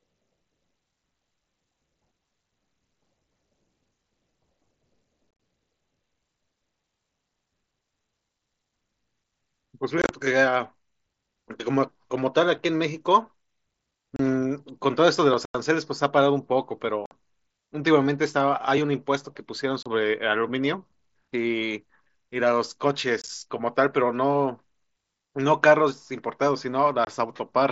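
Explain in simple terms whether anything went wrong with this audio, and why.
The speech has unconcealed Bluetooth headset packet loss. Tiny chunks of sound between headset and phone went missing, leaving abrupt gaps. You hear brief dropouts or crackle at about 5.3, 10.0, 14.2, 15.5, 17.1, 19.8, 23.2 and 27.1 seconds, each lasting 20 to 90 milliseconds.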